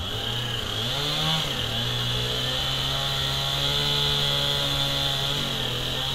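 Sound recording, no technical faults detected.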